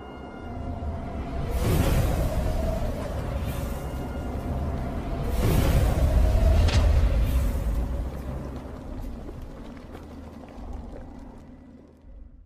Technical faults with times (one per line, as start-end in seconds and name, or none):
none